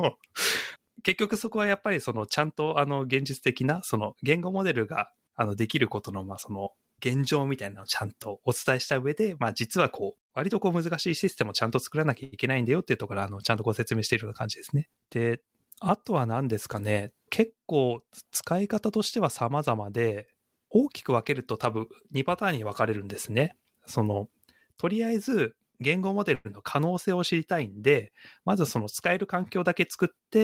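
A speech recording with a few network hiccups scattered through it. At 12.23 s there's a short stall from a late packet: the sound gets held for about 89 ms, to 12.34 s. The receiver was waiting on a packet that hadn't shown up, so it stretched the last bit of audio, then picked up exactly where it left off. Nothing is lost, but everything after it now runs about 89 ms later. Then from 14.75 to 15.66 s there's a jitter buffer speed-up. The talking runs about 11% fast at unchanged pitch and sounds a little rushed. Too much audio had piled up in the buffer, so the receiver trimmed out tiny pitch-period-sized slices over and over, shaving off roughly a tenth of a second to pull the delay back down. The same thing happens again from 28.40 to 29.59 s, this time at about 8% fast and again dropping roughly a tenth of a second. Between those, at 26.35 s, the sound freezes for about 102 ms, to 26.47 s. 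It's a held, fading continuation of the last sound rather than real silence, and it resumes with nothing missing, adding about 102 ms of delay. That's a call audio freeze, likely from packets getting held up in transit until the jitter buffer ran dry.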